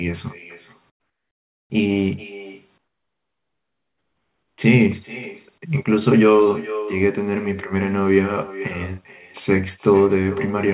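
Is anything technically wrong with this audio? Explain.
Yes, there are two problems, both typical of an internet call.

Echo with no canceller runs through the whole clip. Everything said comes back roughly 0.4 s later, about 16 dB down. The far side's microphone is picking up its own loudspeaker, and nothing is subtracting that signal before it's sent back over the network. So each phrase gets a faint, thinner ghost trailing behind it.

Comfort noise in place of the background shows up twice, from 0.9 to 1.7 s and from 2.78 to 4.58 s. In those gaps the real room tone, already sitting about 48 dB below the loud parts, drops away. A flat, featureless hiss takes its place, about 20 dB quieter in the first gap and about 16 dB quieter in the second. This is likely discontinuous transmission: the sender's voice detector decided nobody was talking and stopped sending audio, and the receiver synthesised a stand-in noise until the sound resumed.

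The top end stopping at 4 kHz is just the narrowband call codec, which fits G.711 at 64 kbps, and isn't a fault here.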